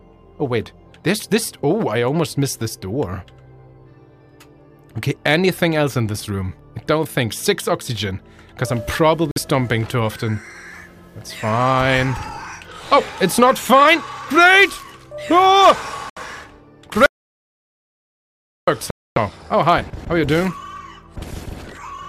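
The audio breaks up four times. Three are short Bluetooth stalls, at 9.31 to 9.38 s with about 50 ms of silence, at 16.10 to 16.17 s with about 69 ms, and at 18.91 to 19.18 s with about 256 ms. The sound halts and resumes, which points to a likely wireless stall, where retransmissions delayed packets until the headphone buffer emptied. On a waveform each one is a thin flat gap, and on a spectrogram it is a narrow, fully blank vertical stripe. The other is an audio dropout to silence from 17.06 to 18.67 s, where about 1.6 s of material is lost outright and the sound then comes back mid-flow. The likely cause is the input being lost, through a disconnect or an unintended mute, while silence kept being written. The waveform shows a long dead-flat line with no room tone, and the spectrogram shows a wide, completely empty band with hard edges on both sides.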